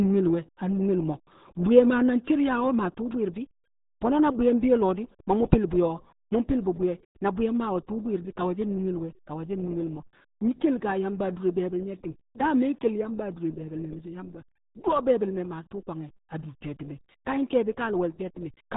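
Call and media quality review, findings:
RealAudio 14.4 codec, whole clip: speech muffled and gargly, nothing above 3.8 kHz, heavy codec damage consistent with an 8 kbit/s low-rate speech coder. Unlike a simple low-pass filter, the gargle and smearing show the coder itself, not just bandwidth limits.

One channel drops out, 2.96 s to end: abrupt step down of about 6 dB, never recovering. Likely cause is a lost stereo channel folded to mono.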